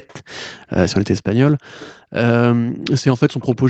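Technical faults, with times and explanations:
0.08–0.14 s, 0.37–0.42 s, 1.79–1.89 s and 3.4–3.55 s, echo leak: short, faint repeats of the speech trail the original by about 230 ms. They're around 30 dB down in the first two, closer to 20 dB at 1.79 s and about 25 dB at 3.4 s. The likely cause is a loudspeaker on the far end whose echo canceller let some of its own playback back into the mic and sent it down the line.
0.54–0.76 s, 1.52–2.2 s and 2.42–2.94 s, background gated by the echo canceller: the room tone suddenly sinks, by as much as about 40 dB, then comes back up. The first dip lasts about 0.2 s, and the other two last about half a second each. The canceller clamps the mic hard while the loudspeaker is playing and releases it afterwards, so the background pumps in and out.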